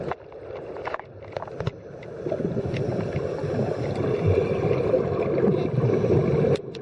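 No dropouts, clicks, distortion or level jumps turn up anywhere in the clip.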